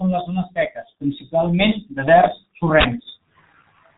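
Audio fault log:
Throughout: G.723.1 codec. The speech is squeezed into roughly 6.3 kbit/s and cut off above 4 kHz, so it comes across muffled and hoarse. The voice model only refreshes every 30 ms frame, which smears the consonants badly. The damage here is heavy.
2.81 to 2.85 s: uninitialised buffer. You get a sudden, loud blast of digital noise lasting about 43 ms. A block got played out before anything was written into it, so stale memory was heard as sound, which fits a 2048-sample buffer.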